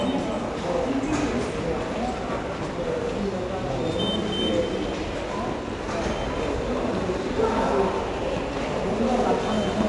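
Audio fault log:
Throughout: 4-bit ADPCM compression. Each sample is coded as a 4-bit step from a prediction, so the quantisation error rides on the signal as a gritty, level-following hiss that is plainly audible on louder passages, with roughness on sharp attacks where the adaptive step lags. Nothing is present above about 10.6 kHz, which dulls the top end and fits a rate near 89 kbps at a sample rate around 22 kHz.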